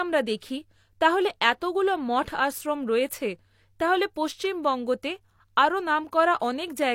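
A speech recording with a single pre-echo fault at about 0.40 s, where a short hiss runs ahead of a sharp onset for roughly 19 ms and softens its attack. A block-based transform codec spreads quantisation noise across its whole block, so noise scaled for the loud onset leaks into the quiet moment before it. On a spectrogram this shows as a thin broadband smear just left of the onset; the waveform shows low-level fuzz before the transient.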